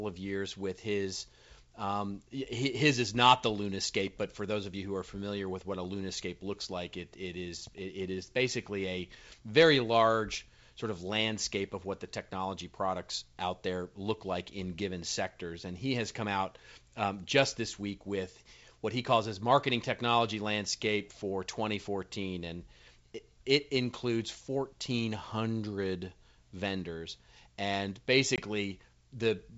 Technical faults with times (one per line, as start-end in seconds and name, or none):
28.36-28.40 packet loss on an ADPCM call